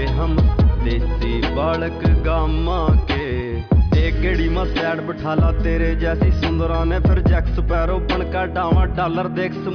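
No technical faults are audible.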